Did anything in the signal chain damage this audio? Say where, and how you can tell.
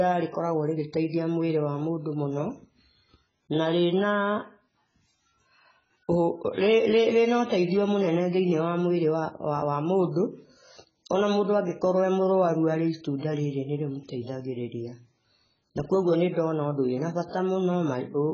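Yes. AAC compression runs throughout the speech. Nothing is present above 7.6 kHz, and the sound is heavily dull and smeared, with a warbling, fizzy texture on sibilants. The codec stage is the likely cause, which fits AAC-LC at a very low bitrate, around 12 kbps.

Pre-echo appears from 6.53 to 6.58 s, a hiss about 45 ms long arriving before a sharp attack, which itself sounds softened. Within that block the codec spread quantisation noise sized for the loud onset evenly, so the noise also filled the quiet gap preceding it.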